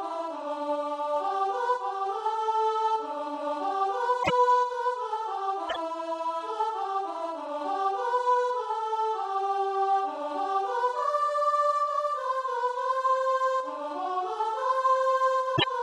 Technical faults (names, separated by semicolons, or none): broken MP3 bit reservoir